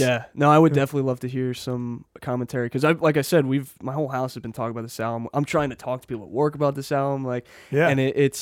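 No technical faults are audible.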